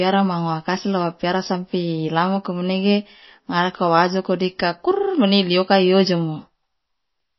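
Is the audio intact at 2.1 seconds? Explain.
No. At 2.1 seconds, as throughout the clip, the speech has a watery, swirling texture and nothing above 5.8 kHz, likely MP3 compression at a low bitrate near 24 kbps. Unlike a plain low-pass filter, weak frequency lines flicker on and off between frames.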